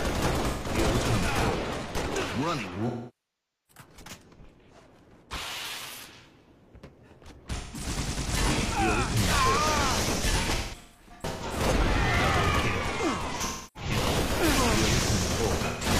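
Smeared, noisy, phasey patches interrupt the sound at 0.48 to 0.68 s, 7.55 to 7.84 s, 13.45 to 13.91 s and 15.67 to 15.86 s. The longer gap at 2.87 to 3.83 s decays toward silence and fades back in. Between 10.42 and 11.60 s the damage is broken into several short smears, the longest around 150 ms. This is AAC frame loss with concealment: the decoder covered missing frames by repeating the last good spectrum with altered signs and energy, and faded out when the loss ran long.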